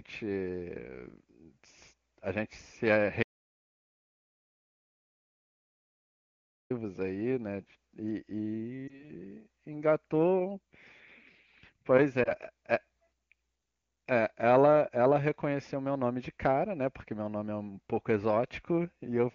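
A speech recording carried over AMR wideband (HD Voice), with one long dropout and two short frame losses. Between 3.23 and 6.70 s the input was most likely lost, through a disconnected device, a broken link or an accidental mute, while the recorder kept writing silence. The result is an audio dropout to silence: the speech stops abruptly, about 3.5 s of dead silence follows with no room tone underneath, and the speech resumes mid-flow, so whatever was said in that gap is missing. Later, radio errors corrupted single speech frames, each carrying 20 ms of audio, and the AMR decoder filled each lost frame by repeating the last good pitch and vocal tract settings at reduced gain. These lost AMR speech frames are heard from 8.88 to 9.12 s and from 12.23 to 12.34 s as a brief dip or warble, followed by a moment where the speech comes back weak or rough. Outside these faults, the wideband codec itself adds little or no audible damage, which points to one of its higher bitrates.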